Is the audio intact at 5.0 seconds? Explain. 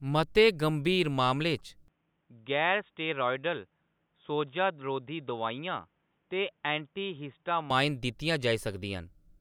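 No. At 5.0 s the speech falls inside a stretch from 1.88 to 7.70 s where the input likely switched to a poorer device. The sound turns dull and boxy, drops by about 5 dB, and carries a new noise floor roughly 45 dB below it, with no gap at either switch. On a spectrogram the energy stops sharply at 3.8 kHz across that span, and the waveform shows a visibly smaller envelope.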